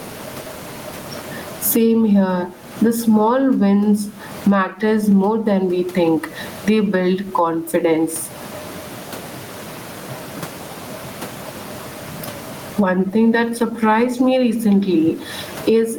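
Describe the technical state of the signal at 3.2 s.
Gain pumping at 3.2 s, as throughout: gain likely set far too high makes a fast limiter duck loud speech around 20 dB.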